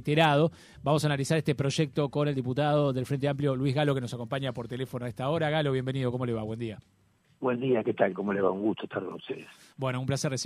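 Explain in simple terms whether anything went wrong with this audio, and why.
Nothing went wrong with this audio that a careful listener can pick out. At no point does the sound break, jump or change in a way that suggests a problem, so there is no fault to explain.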